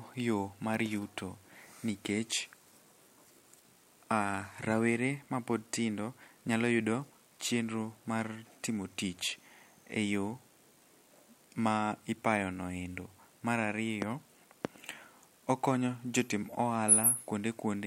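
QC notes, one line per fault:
No fault found, so there is nothing to log in these QC notes.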